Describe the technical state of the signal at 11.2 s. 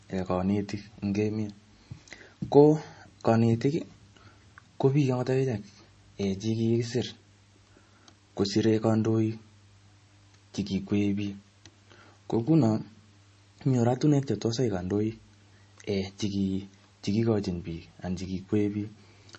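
MP3 compression at 11.2 s, present throughout the speech: the sound likely comes from a starved encoder, consistent with roughly 32 kbps, cutting everything above 8.3 kHz and leaving a watery, swirling texture.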